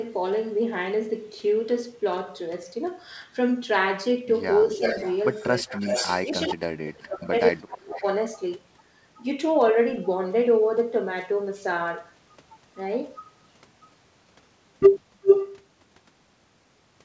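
Speech suppressed in double talk first appears from 4.64 to 4.84 s, a dip of about 10 dB. It returns briefly at 5.64 to 5.68 s, about 15 dB, and then heavily from 6.27 to 8.03 s, where roughly a second of it is lost at up to about 35 dB down. The echo canceller likely mistook overlapping talk for loudspeaker echo and attenuated the near talker. On a waveform these show as sudden notches in the envelope, and the spectrogram shows faded or blank patches within continuous harmonics.

Echo leak runs from 4.74 to 6.26 s as a copy trailing by 361 ms at about 5 dB below the speech, again from 7.58 to 8.43 s at 366 ms and about 15 dB down, and from 15.24 to 15.53 s at 381 ms and about 10 dB louder than the speech. This is likely residual loudspeaker pickup that got past cancellation. It looks like the same spectral shapes repeated about 0.37 s later, all capped at the 8 kHz ceiling of the G.722 call codec.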